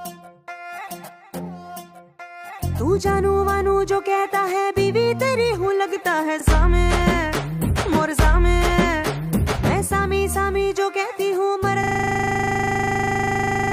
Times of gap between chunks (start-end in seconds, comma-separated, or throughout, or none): none